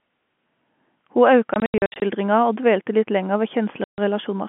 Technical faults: packet loss filled with silence

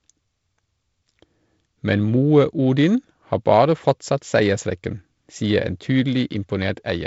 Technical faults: none

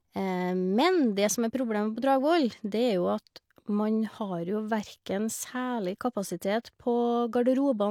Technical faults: none

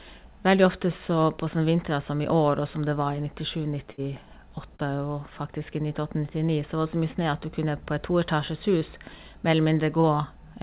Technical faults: burst of packet loss; short concealed packet loss

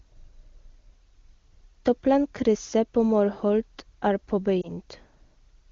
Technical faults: lost AMR speech frames

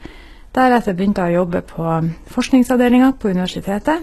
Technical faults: HE-AAC compression

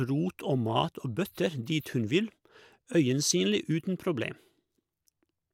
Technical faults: none

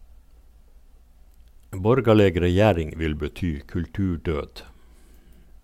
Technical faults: drift correction step

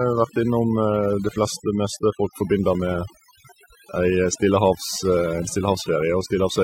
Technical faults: overdone noise removal

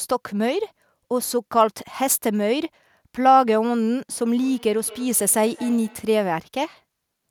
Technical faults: feedback echo between two devices

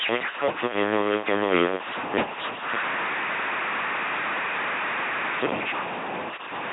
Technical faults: stuck bit; LPC-10 vocoder

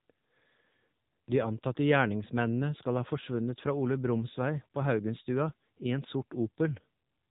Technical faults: AMR narrowband mobile codec

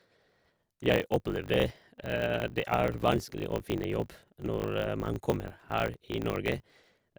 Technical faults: block size mismatch (truncated)

